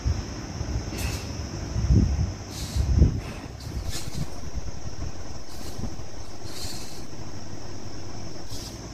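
At 3.86 s a DC step of about -28 dBFS shifts the waveform's zero line, holding until 8.60 s; each shift is heard as a low thump.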